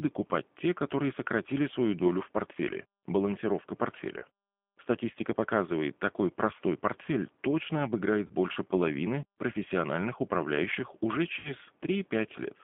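Throughout, the speech passes through a G.729 codec, which fits an 8 kbit/s stream. The codec rebuilds the speech from a filter model and sparse pulses, and the band runs only from 200 Hz to 3.4 kHz. The result is thin, plainly rough and synthetic.

VoIP packet loss concealed by the speech codec occurs at 4.19 to 4.24 s, at 8.27 to 8.33 s and at 11.39 to 11.54 s. The decoder fills each gap by extending the last sound. This gives brief buzzy or noisy, fading smears, and the last one is longer.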